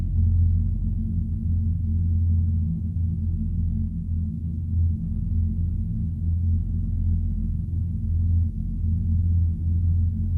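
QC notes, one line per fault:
No technical faults can be heard anywhere in the audio, and the signal shows nothing that calls for attention.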